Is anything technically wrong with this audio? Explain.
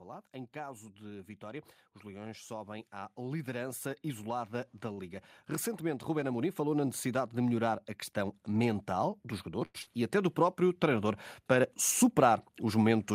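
Yes. Automatic gain rising occurs from 0.05 to 5.18 s and again from 5.78 s to the end: the gain control judged the input too quiet and lifted speech and background together, by about 8 dB in the first rise.

Short stalls from a late packet occur at 4.93 to 4.99 s and 9.65 to 9.76 s. The jitter buffer ran dry, so the last sound was held for 40 ms and then 89 ms before resuming where it left off.

Short concealed packet loss occurs at 9.82 to 9.88 s. About 60 ms never arrived and was patched by extending the preceding sound before blending back, giving a brief smear or wobble.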